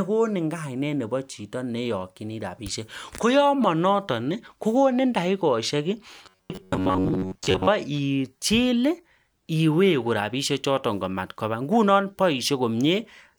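Speech clip, and from 6.23 to 7.68 s it goes robotic: a rigid, metallic buzz at 93.8 Hz that only loosely tracks the talking. That's robotic sound from repeated short buffers, likely audio arriving too slowly, so a roughly 10.7 ms chunk gets looped over most of that stretch.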